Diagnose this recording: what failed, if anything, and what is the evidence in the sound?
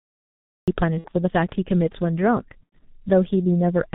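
The opening is a cut-off start at the recording or capture stage: from 0 to 0.68 s there is only digital silence, and the speech then begins abruptly in the middle of a sound with no natural attack. Capture evidently began after the talker had already started.

Throughout, the speech is band-limited below 4 kHz, muffled and hoarse, with smeared consonants. This is heavy codec damage at the codec stage and fits the G.723.1 codec at about 6 kbit/s, whose 30 ms frames and slowly updated vocal model cannot track fast articulation.

At the network stage there is VoIP packet loss concealed by the speech codec, at 0.99 to 1.08 s and again at 2.63 to 2.73 s. The decoder fills roughly 60 ms and 90 ms of gaps, consistent with two and three lost 30 ms frames, by repeating its last pitch and filter at falling gain, which produces a buzzy tone or coloured noise that fades.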